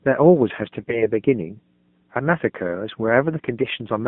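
Throughout the speech runs a steady 60 Hz mains hum, well below the voice. A ground loop or nearby transformer is leaking the power line into the signal.

The whole clip also carries the AMR narrowband mobile codec. The band stops near 150 Hz and 3.5 kHz. The buzzy, synthetic voice points to a low rate, around 7.4 kbps.

From 0.80 to 1.12 s, AMR bit errors make the voice hoarse, scratchy and gargly, though pitch and level hold. Flipped bits misplace the excitation pulses across roughly eight 20 ms frames.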